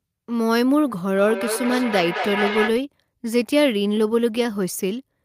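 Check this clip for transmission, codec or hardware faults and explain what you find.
There's one problem: a feedback echo between two devices from 1.17 to 2.76 s. A second device in the room replays the sound, and this microphone picks it up again. Repeats come round every fifth of a second or so, thin and ringy, at about 5 dB below the speech.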